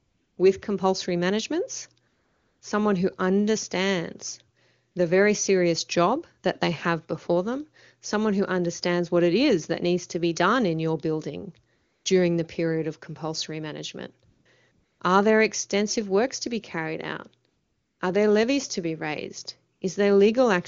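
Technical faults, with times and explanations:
0.0–0.37, 2.07–2.61, 4.91–4.95, 11.75–12.05, 14.29–14.45, 14.71–14.99, 17.47–17.99 and 19.75–19.81 s: AMR comfort noise. The phone stopped sending speech in pauses, so the real background gives way to smooth synthetic hiss, 40 to 540 ms long.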